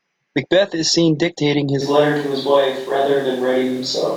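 A speech clip in which, at 1.83 s, right after "is seen dictating", the sound turns abruptly roomy and hollow and stays that way to the end, the mark of a switch to a distant microphone, likely because the close microphone's feed dropped out and a farther pickup took over. The level stays roughly the same, but bass thins and room noise sits only about 25 dB below the speech. On a spectrogram the low end weakens and reverberant tails smear across pauses; on the waveform, gaps fill with a raised noise floor.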